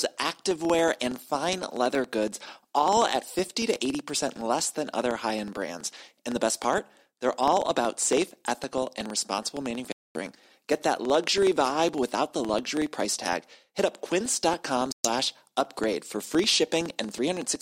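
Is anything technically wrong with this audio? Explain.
Yes, two faults are audible.

The whole clip carries a filter restarted on every block. The filter drops its state at each block boundary and starts from silence, so each block opens with a small transient. This produces a buzz of ticks at about 21.5 Hz, which fits a 2048-sample block. Unlike random clicks, the ticks are strictly periodic and grow louder or softer with the speech.

There are two Bluetooth dropouts, likely caused by packets reaching the headphones too late. The first runs from 9.92 to 10.19 s, right after "safe ethical and responsible". The second runs from 14.92 to 15.09 s, just before "upgrade for free". Each is a silent hole, and the sound resumes further on rather than pausing, so the speech in the gap is missing rather than delayed.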